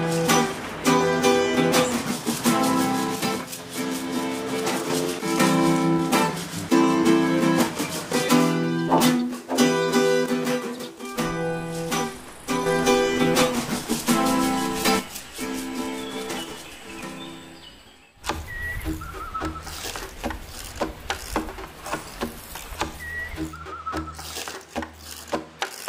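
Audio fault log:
3.16–4.90 s, 10.26–12.66 s and 14.99 s to the end: one channel drops out. One side of the stereo feed likely cuts off for each of these spans. In the mono mix, sound shared by both channels falls abruptly by about 6 dB at each onset and recovers just as suddenly after the first two gaps. Anything carried only by the missing side vanishes. The final loss lasts the rest of the clip.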